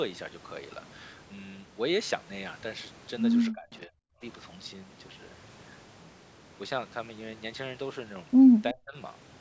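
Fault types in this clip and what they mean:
Speech suppressed in double talk: at 3.51 to 4.23 s and 8.72 to 8.95 s, the voice sinks sharply, by about 40 dB and then about 30 dB, over roughly half a second and a fifth of a second. The echo canceller likely mistook overlapping talk for echo and turned everything down.
Echo leak: at 8.64 to 8.73 s, a faint copy of the voice returns 307 ms late, about 20 dB below the speech. This is likely one side's canceller letting loudspeaker sound reach its microphone and sending it back.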